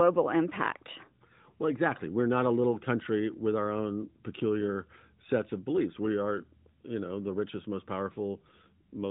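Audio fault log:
Nothing here needs logging, just speech coming over a narrowband mobile codec path with the top end stopping a little short of 4 kHz, as that path is meant to.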